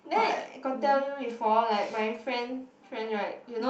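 Nothing stood out on listening to this speech, which came over an Opus call path.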